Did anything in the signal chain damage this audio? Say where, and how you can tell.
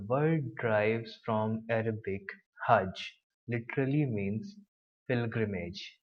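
Yes, at the codec stage. From 1.41 to 3.74 s the speech goes dull and gritty, then recovers. That's a Bluetooth SBC bit pool drop: the link got congested, the bit pool fell and the top sub-bands were starved. The sound fits a drop from about 28 to 13, roughly 102 kbps.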